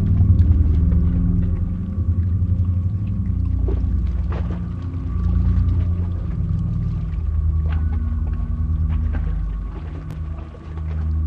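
Chunks out of order at 10.11 to 10.13 s: a 5.8 ms chunk played three chunks late, leaving three hard joins, heard as a brief jumbled flicker.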